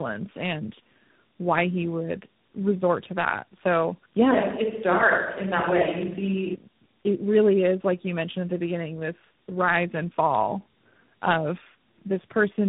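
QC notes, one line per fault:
Throughout: tandem speech coding. The speech is rough, muffled and warbly, with nothing above about 3.8 kHz. The character fits three different speech coders in a row, each re-coding the already damaged output of the one before, so their distortions stack. A single narrowband codec would be band-limited but cleaner. Plain low-pass filtering would dull the sound without this compounded grit and warble.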